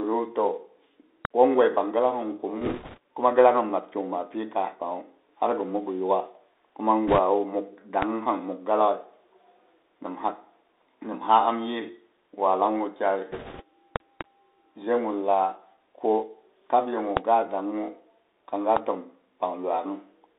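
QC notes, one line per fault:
Throughout: Bluetooth CVSD headset codec. Everything's squeezed into a phone band of roughly 300 Hz to 3.7 kHz, and the one-bit, 64 kHz delta coding can't keep up with loud, bright bits. S sounds go scratchy and there's a grainy hiss underneath the speech.
1.25, 8.02, 13.96–14.23, 17.17 and 18.77 s: loud pop. These are sharp single pops, except for a pair spread across 13.96–14.23. They jump out roughly 25 dB over the speech, and the last one sits nearer 20 dB. The first lands just before "goi pang gi". These are likely static or switching transients riding on top while the speech carries on underneath.
2.61–2.98, 7.07–7.19 and 13.31–13.62 s: bit errors on a Bluetooth voice link. Short stretches of rushing, crackly noise smear the speech, with the first ending right before "kuma gi". That points to a few percent of bits flipping on the CVSD link. Each bit only nudges the signal a little, so there are no hard clicks, just a crackly wash.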